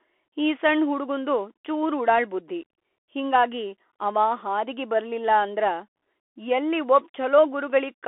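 From start to end, the speech passes through a Bluetooth CVSD headset codec. Each sample is one up-or-down bit with an adapting step, which fits a 64 kbit/s stream. Nothing above 3.8 kHz survives. The band sits near 300 Hz to 3.4 kHz, and the coding damage is plainly audible.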